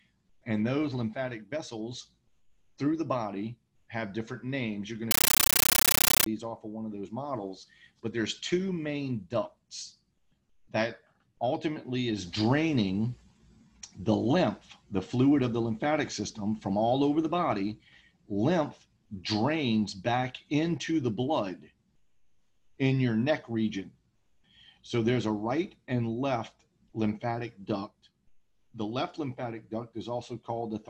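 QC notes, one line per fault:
5.11 to 6.26 s, compressed stream played as audio: the sound is replaced by very loud, harsh chattering static, a rapid rattle of noise bursts about 13.3 ms long repeating 31.25 times a second, with silence between them. The output is treating an undecoded bitstream as ordinary PCM samples. Each 32 ms frame carries a dense block of coded data followed by zero padding, which fits an AC-3 stream at around 640 kbps.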